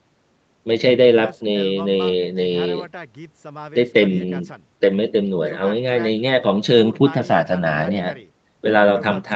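No technical faults can be heard in this speech recording.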